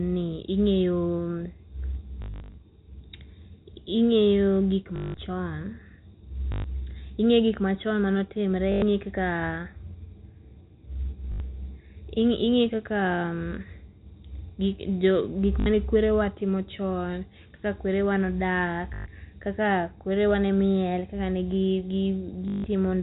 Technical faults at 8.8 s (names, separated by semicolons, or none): packet loss with last packet repeated